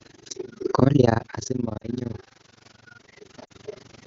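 Throughout the speech there is overlap-add ripple. The frames were recombined with an overlap whose gain does not sum flat, so the level dips by about 60 dB once per frame. This produces a rough flutter at around 20 Hz.

From 0.79 to 2.27 s the automatic gain rises. The input level drops by about 21 dB, partly because the talker shifts around 0.5 s, and the gain control slowly adds about 6 dB. Voice and room noise swell together.

At 1.77–1.87 s and again at 3.45–3.52 s there are lost AMR speech frames, each gap covering 40 ms, which fits two lost wideband frames. The decoder repeats the last good parameters with falling gain, so the sound drops to near silence before returning weak or rough for a moment.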